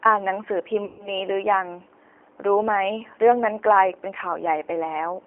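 A speech recording with a rough, slightly synthetic, band-limited tone between about 300 Hz and 3.4 kHz, the plainly audible signature of the G.729 codec, whose coarse pulse-based resynthesis fits an 8 kbit/s VoIP link. From 0.85 to 1.20 s the voice smears into a fading buzzy tone or coloured noise, then stays weak: VoIP packet loss concealed by the speech codec, with roughly 140 ms missing, consistent with about seven lost packets.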